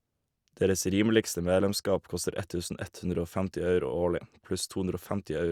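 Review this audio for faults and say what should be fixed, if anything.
Nothing needs fixing: the speech signal is continuous and steady throughout, with no audible technical fault.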